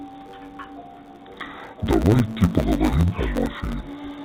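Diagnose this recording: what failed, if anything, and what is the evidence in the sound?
The failure is at the sample-format conversion stage: interleaved audio read as planar, throughout the speech. Each 10 ms block of alternating left and right samples is split into halves and played at half speed. The speech sounds dull and robotic, with a 100 Hz buzz at the block rate and no clear octave drop.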